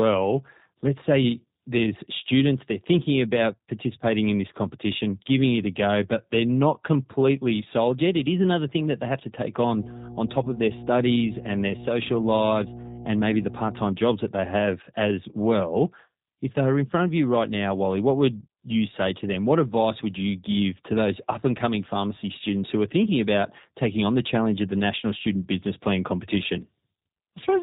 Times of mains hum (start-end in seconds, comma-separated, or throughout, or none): 9.67-13.91